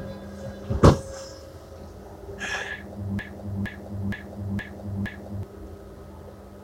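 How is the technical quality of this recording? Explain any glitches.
The recording has one clear fault, a broken-record loop from 3.19 to 5.43 s. A 467 ms fragment repeats identically five times, likely because playback stalled and re-sent its last buffer. Unlike an echo, the repeats don't decay, and the audio meant for that stretch is lost.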